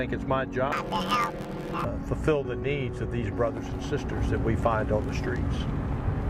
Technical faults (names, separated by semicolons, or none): planar audio read as interleaved